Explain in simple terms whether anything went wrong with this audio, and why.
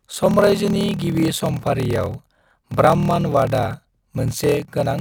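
Something went wrong: a block size mismatch (padded). One stage hands over shorter chunks than the next expects, which fits 1024-sample blocks, and fills each gap with silence. Throughout, the speech carries a 38.3 Hz buzz and runs slower, at 0.889 speed, with its timbre unchanged.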